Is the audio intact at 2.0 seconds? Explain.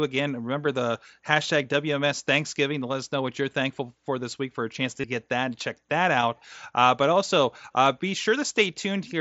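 Yes, at 2.0 seconds the speech plays through intact, with no dropout, click or other fault at that moment.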